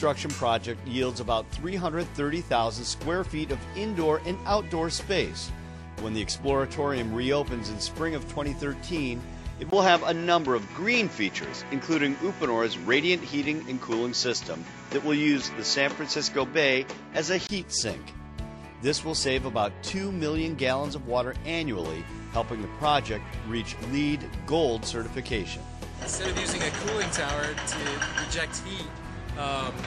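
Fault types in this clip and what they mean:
Input switched to a poorer device: after a 20 ms gap at 9.7 s, the sound turns dull, with nothing above 7.6 kHz, a level jump of about 5 dB and faint new background noise, until 17.5 s. This is likely a change to a narrower-band microphone.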